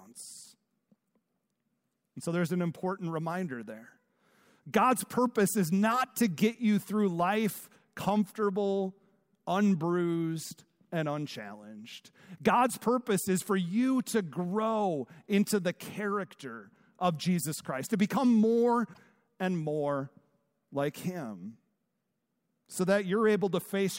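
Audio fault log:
18.90–18.98 s, damaged data in a compressed stream: a break of about 0.08 s between "to become more" and "and more", heard as a chirp, squawk, click or short gap, because corrupted frames there were misread or rejected until the decoder resynchronised on a later frame header.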